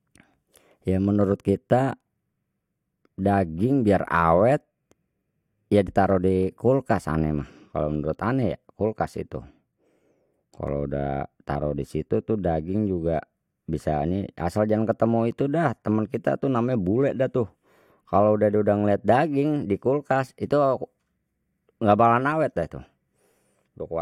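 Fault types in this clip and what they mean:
No technical faults can be heard anywhere in the speech recording. There is nothing here that calls for a fault entry.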